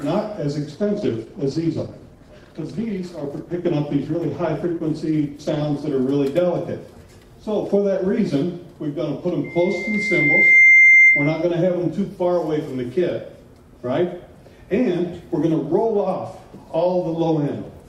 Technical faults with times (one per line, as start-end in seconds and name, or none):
0.70-6.03 call bitrate drop
9.44-11.47 loudspeaker feedback squeal